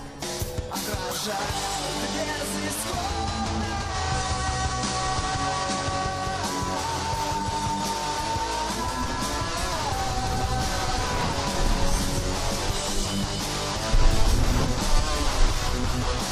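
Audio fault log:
3.82–6.23 s, digital radio blending to analogue: receiver lost digital and cross-faded to FM over 159 ms, bringing hiss about 30 dB down, level shifting about 1 dB.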